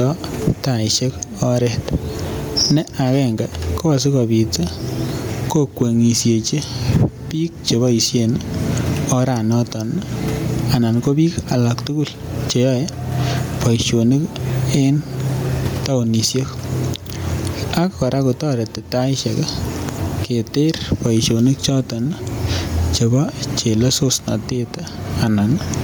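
Throughout the speech, the level breathes: the background swells up in the pauses, then ducks by around 20 dB as each loud syllable arrives. This is gain pumping, likely from input gain set far too high with a fast limiter clamping every peak, so dynamics sound squashed. The room noise, about 39 dB below the speech, rises and falls with it.

Also present for the whole clip is plainly audible Bluetooth LC3 compression, likely the cause of the breathy, grainy edge on the speech where upper-band detail has been replaced by coded noise. The damage fits a 48 kbps stream in 10 ms frames, with the band reaching about 20.2 kHz.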